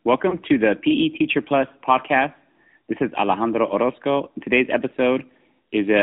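Speech, passed through the AMR narrowband mobile codec for its whole length. Nothing above 4 kHz survives, so it sounds muffled and phone-like. Voiced sounds take on a plainly audible buzzy, synthetic edge. That level of damage fits a higher-rate mode near 10 kbps.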